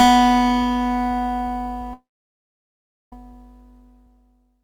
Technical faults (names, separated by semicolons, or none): long network dropout